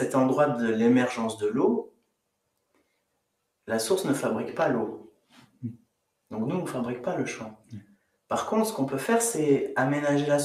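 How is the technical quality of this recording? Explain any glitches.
The technical quality is compromised by a speech-tuned noise suppressor. A noise suppressor applied to music or sounds stays active for the whole clip. It treats steady content as noise, so level swings by a few decibels, held parts thin and tails pump. The sound is also cut by the noise suppressor at 1.83–2.28 s, 2.44–3.22 s, 5.11–5.62 s, 5.78–6.04 s and 7.57–8.29 s. Steady passages sink sharply there, by about 15 to 19 dB, while sudden onsets mostly survive.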